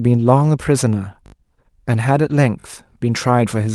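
At 1.26 s a repeated buffer occurs: fresh audio did not reach the device in time, so it replayed its last block. A 20 ms slice sounds several times in a row with a hard join at each repeat, giving a brief buzzing stutter through 1.34 s that fits a 20 ms buffer.

From 2.29 to 2.35 s the speech turns rougher and noisier with no gap. This is a lost packet rebuilt from error correction: the Opus decoder played the low-bitrate copy carried in the following packet. The roughly 40 ms affected fits two lost packets.

At 2.60 s a second repeated buffer produces a shorter stutter, the same 20 ms slice sounding again with hard joins until 2.64 s. Around all three, the Opus call path adds its usual coding noise and a top end that stops near 12 kHz.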